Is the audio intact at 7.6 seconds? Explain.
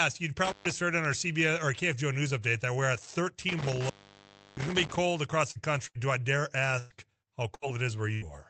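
No. At 7.6 seconds the speech falls inside a burst of packet loss running from 7.54 to 7.65 s. Several packets never arrived in time, so the receiver stretched the last sound it had for about 74 ms, fading it down, and about 80 ms of speech is skipped when the audio resumes. Unlike a plain dropout, the gap is filled with a held, dimming sound rather than silence, and the speech jumps forward instead of picking up where it stopped.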